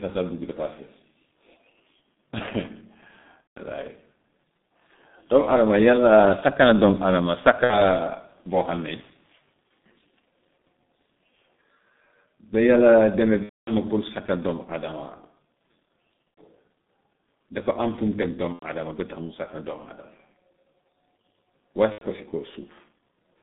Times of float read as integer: none

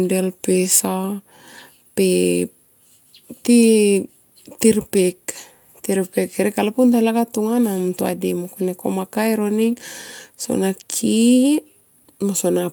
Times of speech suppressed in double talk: none

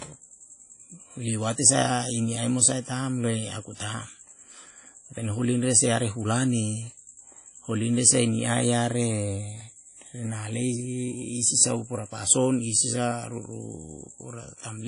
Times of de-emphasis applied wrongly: none

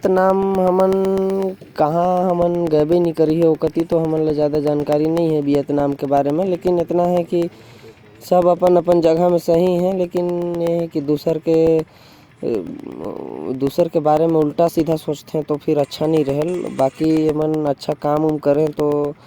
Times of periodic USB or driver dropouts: 0.05-19.17

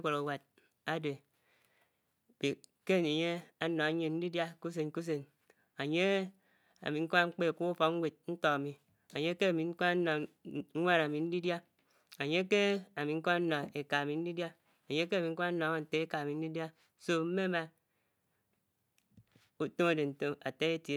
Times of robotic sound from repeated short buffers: none

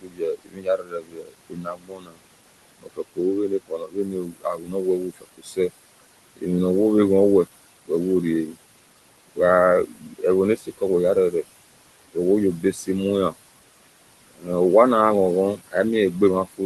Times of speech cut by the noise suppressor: 0.00-6.44, 7.85-13.33, 14.29-14.49, 15.57-16.65

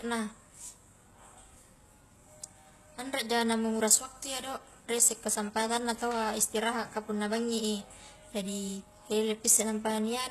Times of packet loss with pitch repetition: none

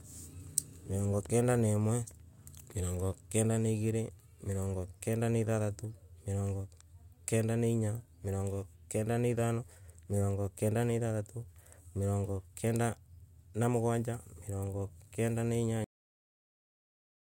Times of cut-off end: 15.84-17.21

